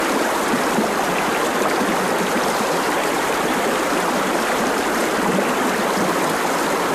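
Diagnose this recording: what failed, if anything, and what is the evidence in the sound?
The codec stage skipped a compressed frame. At 5.88 s the audio jumps ahead by about 20 ms, consistent with a single skipped compressed frame of about 23 ms.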